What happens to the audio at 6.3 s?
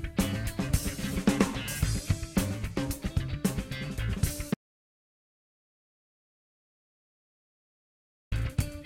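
At 6.3 s the music is gone entirely. It sits inside an audio dropout to silence that runs from 4.54 s to 8.32 s, about 3.77 s of lost sound. The music stops abruptly mid-flow and returns just as suddenly. The gap is silent, with no room tone or noise floor. The likely cause is the input signal being cut off while the recorder kept writing silence. Whatever played during that stretch is lost.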